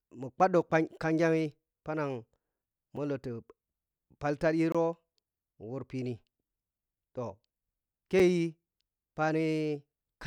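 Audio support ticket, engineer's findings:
Sharp ticks at 2.96 s and 8.19 s, short hole in the speech at 4.72 to 4.75 s. Block of digital silence each time: 5.7, 23 and 5.6 ms of zeros, abrupt edges. Probable cause: output buffer not filled in time, written as silence.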